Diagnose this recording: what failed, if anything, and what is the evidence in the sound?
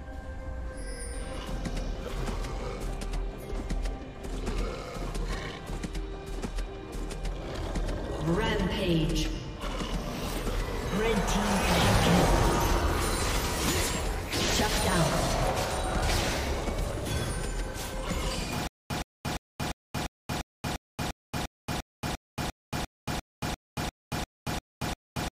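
A stutter with silent gaps starts at 18.67 s and runs to the end: one burst of about 119 ms plays, then about 229 ms of dead silence, repeating every 348 ms, 19 times. The likely cause is a stalled playback or stream buffer that replays its last fragment at each retry and then runs dry. On a waveform this shows as identical short blocks separated by flat near-silent stretches. A spectrogram shows repeating vertical slices with blank columns between them. The audio due in that span is lost.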